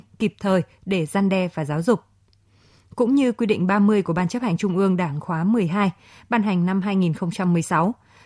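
A speech recording with nothing technically wrong with it.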